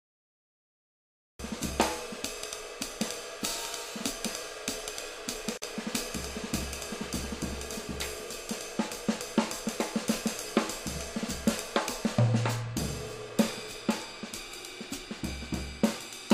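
The clip opens with a cut-off start. Digital silence runs from 0 to 1.39 s. At 1.39 s the sound begins abruptly, already in progress. There is no natural attack or fade-in. The recording or stream evidently started late.

At 5.57 s a gap at a join of encoded pieces opens, lasting about 47 ms, to 5.62 s. Two separately encoded pieces were joined untrimmed, leaving encoder delay and end padding. The continuous sound drops out briefly, then resumes where it stopped.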